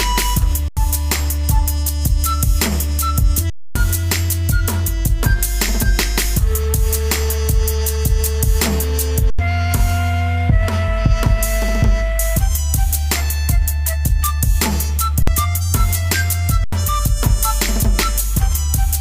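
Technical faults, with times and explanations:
0.68 to 0.77, 3.50 to 3.76, 9.30 to 9.39, 15.22 to 15.28 and 16.64 to 16.73 s, underrun with held sample: the output buffer emptied and the converter held its last value, so the sound flattens out for 85, 256, 85, 50 and 85 ms, and the three 85 ms gaps fit a 4096-sample buffer. When playback returns, roughly 0.1, 0.3, 0.1, 0.05 and 0.1 s of audio is missing.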